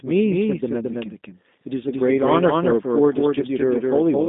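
A doubled audio track runs throughout: a second copy of the speech trails by about a fifth of a second, some 5 dB quieter and dry, likely from a slower capture path.

G.729 coding is also present throughout, with nothing above 3.8 kHz and a line band of about 200 Hz to 3.7 kHz. The rough, synthetic voice fits an 8 kbit/s model-based rebuild.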